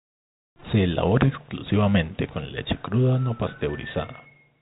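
No technical faults occur anywhere in the recording, and the G.711 telephone coding it passes through leaves nothing audible above about 3.8 kHz, with any coding noise faint at most.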